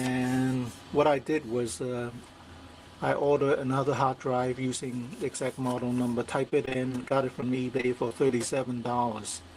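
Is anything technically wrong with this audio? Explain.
Yes. From 6.49 to 8.31 s there is repeated packet loss with a robotic sound. About a dozen short holes, none longer than 25 ms, add up to roughly 200 ms, about a tenth of that stretch. Each hole is patched by extending the preceding sound. The result is choppy, with pieces missing. On a spectrogram, brief smeared or frozen vertical slices interrupt the texture. The waveform shows repeated, too-regular copies where the original detail is missing.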